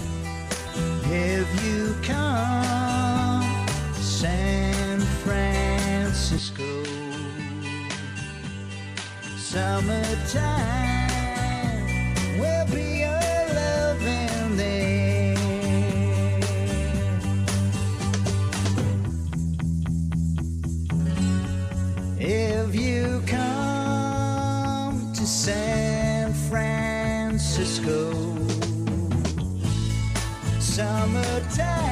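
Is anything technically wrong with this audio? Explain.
Yes. From 6.38 to 9.53 s the sound loses everything above 10.5 kHz, drops a few decibels in level, and picks up a faint new background noise, then returns to its original character. This is likely an input switched to a poorer device: recording moved briefly to a narrower-band microphone with its own gain and noise floor. Unlike a simple filter or EQ change, the level, noise and tone all shift together, with no silence at either switch.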